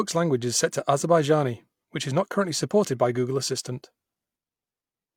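Listening through the recording, nothing stood out as a technical fault at any point.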